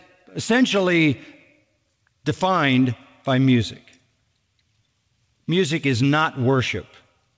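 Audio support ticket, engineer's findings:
Clock drift between sender and receiver, whole clip. Sender clock runs about 3% slow. Jitter buffer keeps draining, forcing the receiver to stretch playback.

Repeated timing corrections, 0.33 to 7.14 s. Short pieces repeated, unevenly spaced. Sound plays at 97% speed, adding roughly a third of a second. G.722 path band-limited at 8 kHz.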